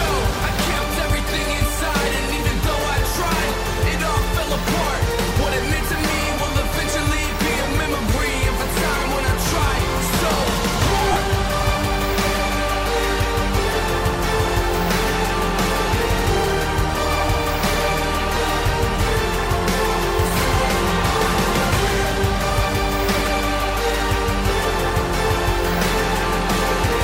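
The audio has lost LE Audio frames at 11.12–11.16 s (about 37.5 ms, consistent with five 7.5 ms LC3 frames) and at 18.35–18.37 s (about 15 ms). In each gap the LC3 decoder conceals the loss by repeating the last spectrum with randomised signs, turning tonal content into a brief noisy smear.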